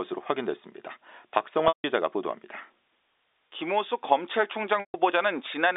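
A speech clip carried over G.711 telephone coding, with its narrow line band, shows packet loss with pitch repetition at 1.68 to 1.84 s and 4.80 to 4.94 s, gaps of 160 ms and 140 ms. Each begins with the last pitch period looped as a brief buzzy hold that fades to silence within about 50 ms, then speech cross-fades back. Unlike a plain dropout, the gap opens with that held tone rather than a hard cut.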